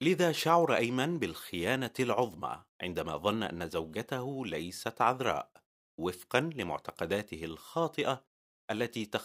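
Speech recording, no audible technical faults anywhere in the clip.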